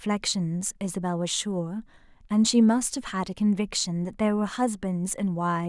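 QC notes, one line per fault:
Nothing to flag here; this speech clip came through with no technical faults to note.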